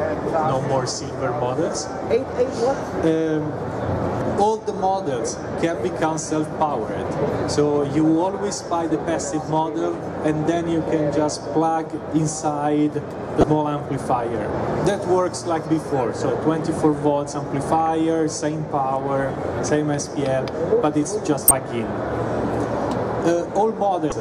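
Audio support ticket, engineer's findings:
Damaged data in a compressed stream, five separate hits: 4.18–4.21 s, 13.40–13.44 s, 15.62–15.66 s, 21.48–21.51 s, 24.09–24.12 s. Corrupted bytes in the encoded data, so the decoder misparses those frames, loses frame sync, and rescans for the next valid header. Heard as a short chirp or squawk of roughly 30 ms each time before clean playback resumes. Check the transport or storage path for byte errors.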